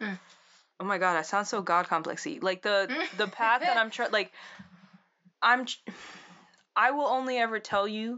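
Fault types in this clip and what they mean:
No faults are present.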